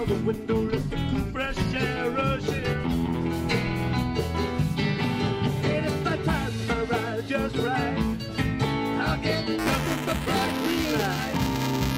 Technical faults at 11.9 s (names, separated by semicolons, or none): buffer tearing